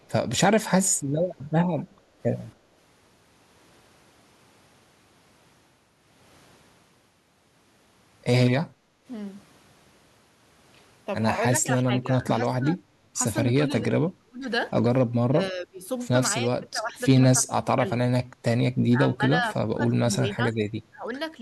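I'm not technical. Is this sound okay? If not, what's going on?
No. At 8.68 to 9.06 s there is background gated by the echo canceller: the part of the system that stops the speaker's sound feeding back into the microphone briefly turned the microphone down, so the room's background sound dips for under half a second, then returns.

From 11.5 s onward there is speech suppressed in double talk, likely because both sides spoke at once and the same echo canceller mistook the talker for echo. The voice repeatedly drops: 11.52 to 12.78, 13.59 to 14.48, 15.28 to 15.85, 16.41 to 16.98, 17.38 to 17.91, 18.92 to 20.57 and 20.91 to 21.07 s.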